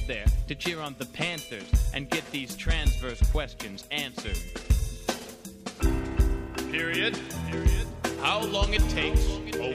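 No dropouts, distortion, level jumps or other technical faults can be heard anywhere in the recording.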